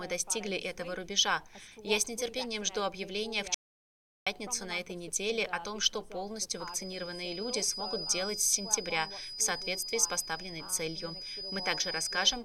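The input path was likely lost for a moment at 3.54 s, through a disconnected source, a failed link or a stray mute, while recording carried on writing silence. The result is an audio dropout to silence lasting about 0.72 s, until 4.27 s. The sound stops abruptly in mid-flow and resumes just as suddenly, and the gap is dead digital silence with no room tone underneath. Whatever occurred during that stretch is missing.

From 6.50 s to the end of the clip, the loudspeaker-to-microphone loop is likely sitting right at its stability limit, so a single frequency keeps ringing without building into a howl. This is a feedback whistle at 5 kHz, heard as a thin, steady tone behind the sound, roughly 10 dB below it, swelling and fading slowly in level as it persists.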